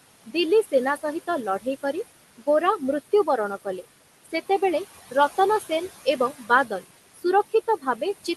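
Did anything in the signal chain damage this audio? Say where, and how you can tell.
Yes, in call processing. Noise suppressor artifacts run throughout, dropping the room noise about 15 dB between phrases. The residue pumps instead of holding steady.

Speech cut by the noise suppressor at 7.15–7.24 s: the suppressor mistook speech for noise and ducked it about 17 dB for roughly a tenth of a second. It sounds faint rather than fully silent.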